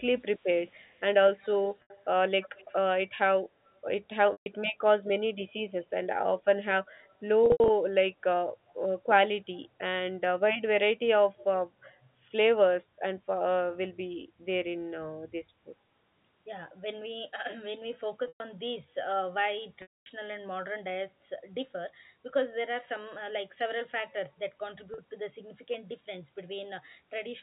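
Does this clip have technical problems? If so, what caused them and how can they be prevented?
Yes. Echo leak: a copy of the speech returns 103 ms late at 0.84–2.75 s, 3.66–3.70 s, 7.04–7.14 s, 8.70–8.74 s and 11.37–11.44 s. It is about 25 dB down in the first and last events and about 40 dB down in the others. The likely cause is a loudspeaker at the far end whose echo canceller passed residue back into the call. A headset or a better-tuned echo canceller at that end would prevent it.

Packet loss with pitch repetition: gaps at 1.82 s (80 ms), 4.32 s (140 ms), 7.46–7.70 s (160 ms scattered, longest 80 ms), 18.28 s (120 ms), 19.82 s (240 ms) and 24.94 s (40 ms) are filled by a repeated pitch cycle that buzzes briefly, then fades. Reducing network congestion or adding forward error correction would prevent it.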